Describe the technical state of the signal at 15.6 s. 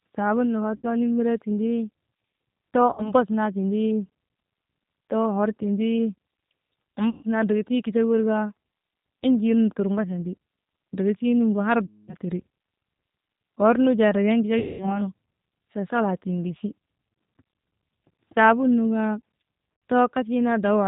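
At 15.6 s the speech carries G.729 codec damage, present across the whole clip. The speech is rebuilt from a vocal tract filter, pitch predictor and sparse pulses, which fits an 8 kbit/s codec, so it sounds rough and synthetic. A spectrogram shows nothing above 4 kHz.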